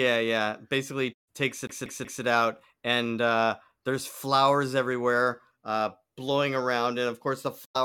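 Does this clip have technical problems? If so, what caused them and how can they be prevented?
Yes, there are two faults in this speech.

From 1.67 to 2.23 s the audio shows a CD stuck on one turn. A slice of about 186 ms plays three times, each pass cut by a brief mute at the jump, just before "it out and uh". The laser is thrown back one track by a scratch at the same point on each rotation. What sets it apart from a network jitter-buffer repeat is the rigid, metronomic evenness of the loop and the identical content every pass. Cleaning or replacing the disc and ripping with a secure, error-checking drive prevents it.

From 7.64 to 7.76 s, right after "blowing around and of", comes AAC frame loss with muting. About 107 ms of sound drops out, which fits roughly five lost frames. The decoder zeroed their spectral data, and the overlapping transform windows fade the sound down and back up. 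Unlike a hard dropout or sample-level glitch, the gap has soft edges. Forward error correction or retransmission on the link, plus decoder-side concealment, prevents it.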